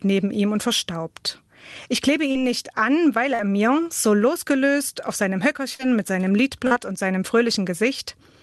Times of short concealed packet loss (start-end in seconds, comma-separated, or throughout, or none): 2.31-2.38, 3.35-3.42, 5.75-5.82, 6.67-6.74